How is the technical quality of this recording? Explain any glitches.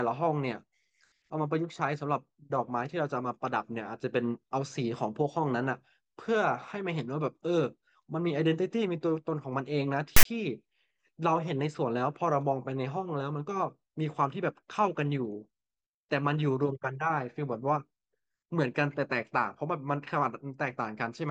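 The speech recording has one glitch. From 10.16 to 10.25 s, a harsh, hard-edged rasp cuts in and then drops to dead silence: file tags played as audio, where a block of text metadata and its zero padding were decoded as samples.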